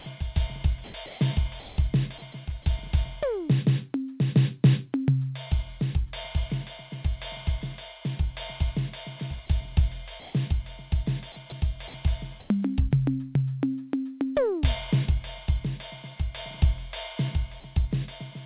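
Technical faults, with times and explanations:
0.84–0.94 s, 1.06–1.20 s, 1.60–1.78 s, 10.20–10.34 s and 12.40–12.50 s: comfort noise in place of the background. In quiet gaps, about 19 to 31 dB below the loud parts, the music's real background turns flat and featureless, shifting level by about 1 to 8 dB. The likely cause is the sender pausing transmission and the receiver filling in synthetic noise.
11.50–11.52 s: sound dropped by the voice detector. A 20 ms slice of the music vanishes into steady noise, then snaps back. The detector likely mistook that moment of music for background and stopped sending, so comfort noise stood in. With nothing above 4 kHz, it sits in a narrowband call path like G.711.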